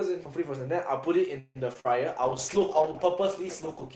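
At 1.39 s the speech stalls until 1.57 s, likely a call audio freeze: packets got held up, the jitter buffer ran dry, and the receiver stretched the last sound into a fading buzz or hiss, about 158 ms of fill with roughly 30 ms of near-silence. The speech then picks up exactly where it stopped, so nothing is lost, just delayed.

From 1.73 to 1.78 s there's a short concealed packet loss. About 20 ms of real audio never arrived in time, and the decoder patched it with a brief continuation of the previous sound before blending back in. You hear a quick smear or wobble, and the hole gets slightly stretched, adding a little time.

Right after, between 1.80 and 1.87 s, a burst of packet loss takes out about 40 ms. The receiver filled roughly 48 ms by carrying the last sound forward and fading it, so there's a held buzz or dying hiss, then the speech jumps ahead with that chunk gone.

From 2.22 s to the end a call bitrate drop sets in: the Opus stream, which had been running at 32 kbps with audio reaching up to 8 kHz, falls to 11 kbps and stays at the bottom for about 1.6 s. 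The coarser coding makes the speech rough, watery and duller.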